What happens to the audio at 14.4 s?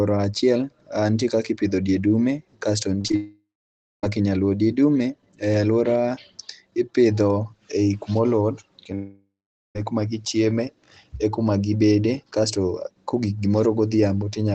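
Nothing goes wrong at 14.4 s: the speech passes through the WebRTC call path there with no dropout, glitch or other fault.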